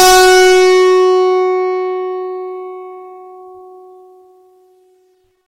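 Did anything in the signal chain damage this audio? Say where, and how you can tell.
Yes, there's hard clipping right at the start of the music, from 0.0 to 1.2 s. It's driven about 17 dB past the ceiling of a converter or fixed-point stage, so peaks get sliced flat, and those square tops spray high harmonics that you hear as harsh fuzz on every loud moment.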